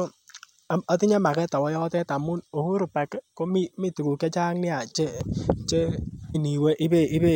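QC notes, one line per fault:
6.34 s: damaged data in a compressed stream. A brief glitch cuts into the speech. A corrupted patch of the compressed stream threw the decoder off, so it lost sync and jumped to the next frame header it could find.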